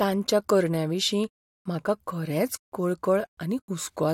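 A short speech recording with no audible technical faults anywhere in the signal.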